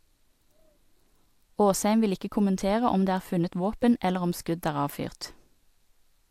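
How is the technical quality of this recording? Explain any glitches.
No technical faults can be heard in the recording, and the signal stays steady and continuous throughout.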